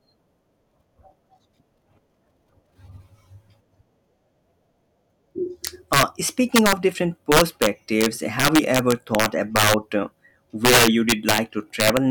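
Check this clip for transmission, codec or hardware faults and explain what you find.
There's one fault here, and it's a nasty one: integer overflow in the speech, five times, at 5.67–6.03 s, 6.56–6.73 s, 7.32–9.74 s, 10.65–11.38 s and 11.80–11.97 s. The gain is pushing peaks about 4 to 7 dB past the integer limit, and instead of clamping, those samples wrap round to the opposite sign. So the loud bits crack violently, far harsher than ordinary clipping, worst through the 7.3–9.7 s and 10.65–11.38 s stretches.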